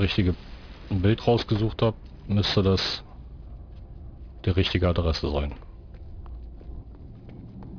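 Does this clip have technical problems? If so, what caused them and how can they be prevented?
Yes. Aliasing runs through the whole clip. The spectrum stops hard at about 5.5 kHz, which fits a drop to an 11 kHz sample rate from a higher one, likely 48 kHz. Nothing above that fold point was filtered out first, so that energy mirrors back down as gritty, metallic tones sitting only about 15 dB under the sound itself. To prevent it, low-pass below the new Nyquist frequency before downsampling, or just use a proper resampler.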